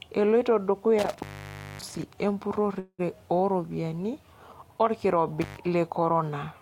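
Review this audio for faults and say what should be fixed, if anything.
Intermittent contact occurs at 0.99 to 2.03 s, with the line open for about 570 ms, and again at 5.42 to 5.57 s, open for about 106 ms. A loose cable or plug briefly breaks the signal path, so the speech drops out with crackle at each edge and only faint hiss remains. Reseat or replace the suspect cable and connectors before recording.

A call audio freeze occurs at 2.79 to 3.01 s. The last sound stretches into a fading buzz or hiss for about 192 ms, including about 50 ms of silence, then speech resumes where it stopped, with nothing lost but 192 ms added. The likely cause is delayed packets draining the jitter buffer. Use a more stable network connection or a larger jitter buffer.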